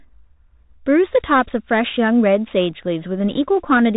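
The speech has passed through a Bluetooth CVSD headset codec from start to finish, consistent with a 64 kbps one-bit delta stream whose adaptive step cannot track fast, loud changes. Nothing survives above 3.8 kHz, so the sound is muffled, sibilants turn scratchy, and a grainy hiss sits beneath everything.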